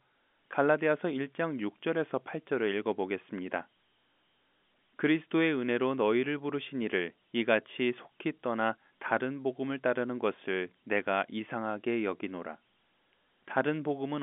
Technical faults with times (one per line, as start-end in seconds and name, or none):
none